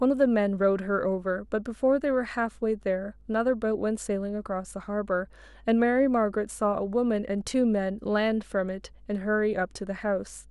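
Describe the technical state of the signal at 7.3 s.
A steady low drone sits under the speech at 7.3 s, a 50 Hz tone with some low harmonics, roughly 30 dB below the speech. It is mains hum, present throughout the clip, where a ground loop or nearby transformer has coupled the power line into the signal.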